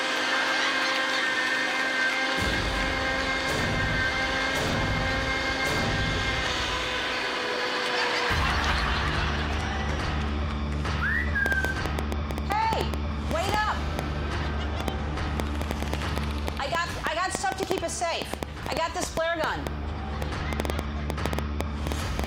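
From 11.46 s to the end of the clip at 22.25 s, a train of clicks runs over the sound: about 5.2 per second at an uneven pace, some fifty in all, each with much the same sharp shape and peaking some 20 dB above the audio. They tick through the pauses too, which sets them apart from distortion that follows the signal's loudness, and their repetition rules out a few isolated pops. The likely cause is interference from nearby equipment or a faulty connection or power supply.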